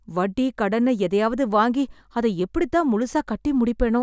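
Listening to the speech here, nothing technical stood out.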